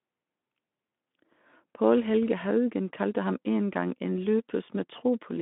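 No technical faults detected.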